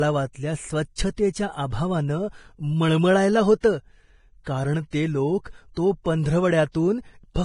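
Throughout, the speech sounds hissy and grainy with blurred attacks, likely from heavy Vorbis compression at a low bitrate; a spectrogram shows nothing above 10.5 kHz and speckled treble. Pre-echo smears hiss ahead of sharp onsets at 0.96–0.98, 3.60–3.63, 4.44–4.46, 4.90–4.93 and 6.72–6.75 s, seen as noise preceding each waveform transient.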